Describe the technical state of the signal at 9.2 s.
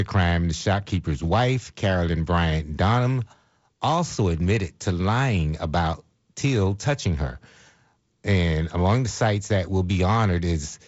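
At 9.2 s the speech is intact, with no fault at that moment; it comes through the G.722 wideband telephone coding path at what sounds like 48 kbit/s, with a little coding noise and nothing above about 7.7 kHz.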